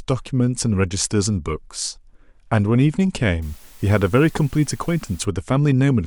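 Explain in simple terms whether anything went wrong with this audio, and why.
From 3.42 to 5.25 s a steady, fairly loud hiss appears. That is low bit depth with dither, consistent with 8-bit audio. Dither turns rounding error into even noise rather than gritty distortion.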